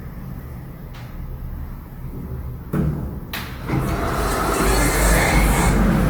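Throughout, tones sound grainy and rough with noise-filled bands, likely from Opus compression in CELT mode near 24 kbps. The bandwidth still reaches 20.2 kHz.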